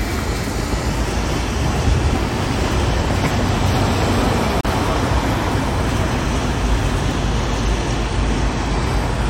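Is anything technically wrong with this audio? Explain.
Yes. A gap at a join of encoded pieces opens at 4.61 to 4.65 s: a gap of about 39 ms where separately encoded segments meet untrimmed, then the sound resumes where it stopped.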